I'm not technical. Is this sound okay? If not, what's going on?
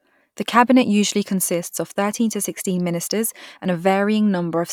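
Yes, this sound is okay, and nothing is going wrong in it.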